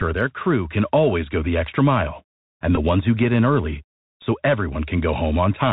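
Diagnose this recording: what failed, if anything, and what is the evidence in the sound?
Bluetooth CVSD headset codec, throughout, at the codec stage: nothing above 4 kHz, scratchy s sounds and a granular hiss, consistent with 64 kbps one-bit delta modulation overrunning its step.

Bluetooth headset packet repeated, network/link stage: a brief 267 Hz buzz at 2.76–2.78 s between "the extra mile and" and "ones who get in", and a tick at 4.22 s after "who get in early".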